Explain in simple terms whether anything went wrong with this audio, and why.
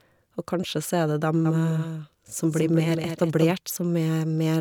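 From 1.45 to 3.53 s the speech has a doubled audio track: a slightly quieter copy trails about a fifth of a second behind. It's likely a second recording path. Unlike an echo, it never fades and cuts in and out abruptly.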